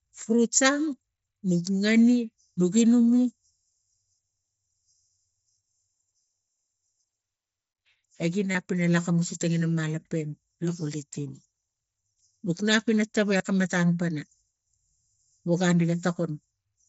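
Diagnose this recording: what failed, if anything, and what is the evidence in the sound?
Concealed Bluetooth headset packet loss on the wireless link between headset and phone, heard twice: at 8.52 to 8.55 s (30 ms) and at 13.38 to 13.40 s (22.5 ms), between "nuk nap ina tawai" and "akam matam pana". Each gap was filled by repeating the best-matching recent stretch of waveform, giving a brief buzzy tone held at full level. The 30 ms gap fits four lost 7.5 ms mSBC frames. On a waveform the gaps show as a short, strictly periodic run at unchanged amplitude. On a spectrogram they show as a block of frozen, evenly spaced harmonics that breaks off where real audio resumes.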